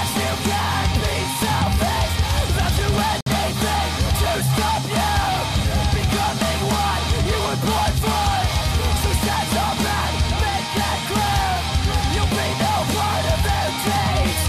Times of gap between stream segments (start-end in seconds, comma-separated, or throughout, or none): 3.21-3.26